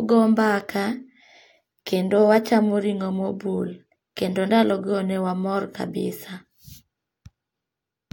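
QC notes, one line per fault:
Nothing stood out on listening to the speech in this recording.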